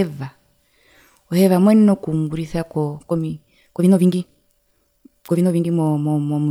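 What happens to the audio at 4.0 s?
At 4.0 s you're inside a time-stretched section running from 2.96 to 5.68 s. The speech suddenly races along at about 1.7x pace, rushed, with the pitch unchanged, likely from software dropping short slices to squeeze the audio.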